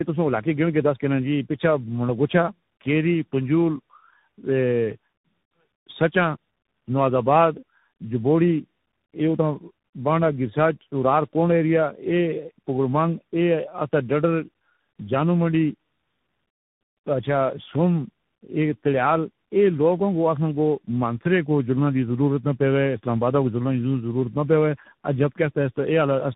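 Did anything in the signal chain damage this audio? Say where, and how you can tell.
Yes. At the codec stage, the speech shows tandem speech coding throughout: rough, muffled, warbly, with several coders' artefacts stacked. A spectrogram shows a hard ceiling near 3.8 kHz and smeared, wobbling harmonics, pointing to AMR-NB twice, then CVSD, each re-encoding the previous coder's degraded output.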